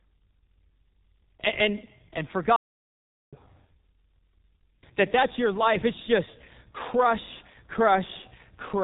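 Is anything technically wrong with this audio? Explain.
Yes, there are two faults.

G.723.1 codec, throughout the clip: the speech has been squeezed through this early internet-telephony codec, which works in 30 ms frames and models the voice only coarsely. Nothing above 4 kHz survives, and the heavy damage points to a bitrate around 6 kbit/s. The result is muffled, hoarse speech whose consonants smear together, because the codec's slowly updated voice model can't follow quick articulation.

Playback stall, from 2.56 s to 3.33 s: just after "and and and", the speech cuts out into silence for about 0.76 s. This is likely a playback stall, where the player ran short of data or its thread was held up, so the output fell silent until playback recovered. It is heard as an abrupt gap in the middle of the flow of speech, not as a natural pause.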